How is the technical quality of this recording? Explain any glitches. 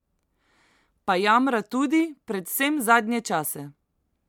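No technical faults can be heard anywhere in the speech, so there are no glitches to explain.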